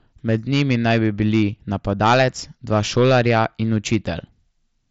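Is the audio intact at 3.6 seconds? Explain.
No. Hard clipping runs through the whole clip, including 3.6 s: speech driven about 8 dB past the ceiling has a small share of peaks cut flat, heard as crackle. The speech also passes through an mSBC Bluetooth path with nothing above 7.7 kHz.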